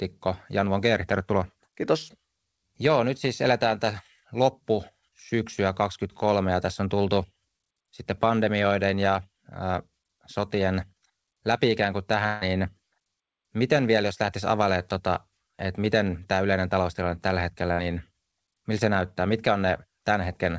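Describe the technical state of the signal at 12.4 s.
At 12.4 s the signal is inside a gap from 12.26 to 12.44 s that sounds like a long network dropout, the likely cause. For about 155 ms the receiver stretches the last sound into a fading buzzy hiss, never reaching true silence, and then the speech resumes with roughly 150 ms of it simply missing. On a waveform this appears as a decaying, repetitive envelope. A spectrogram shows smeared, flattened bands under the G.722 path's 8 kHz ceiling before normal detail abruptly returns.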